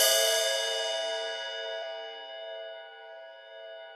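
At 1.81 s there is a brief smeared blip where the sound jumps ahead, losing about 50 ms of audio. These are compressed frames skipped: about two frames of roughly 23.2 ms each never decoded, and their overlap with neighbouring frames softens the join.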